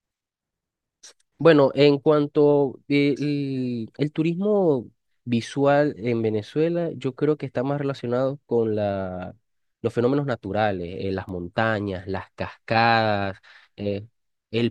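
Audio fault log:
11.29 s, bit error spike: a single sharp tick at about -30 dBFS, with energy spread across the whole spectrum and no relation to the speech around it. Its extreme brevity fits a flipped bit in one or two consecutive samples, which jumps the value by a power of two and returns it straight back. Unlike a dropout click there is no gap or loss of sound, and unlike a clipping crackle it is a lone event rather than a burst on loud peaks.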